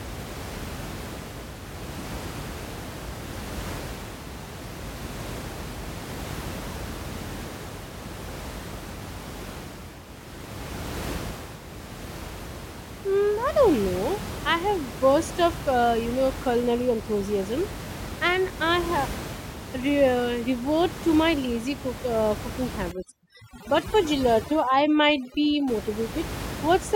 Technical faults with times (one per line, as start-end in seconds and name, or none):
22.92-25.68 overdone noise removal